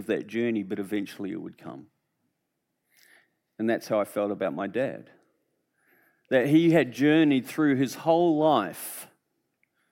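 Nothing in this speech recording reveals a technical fault.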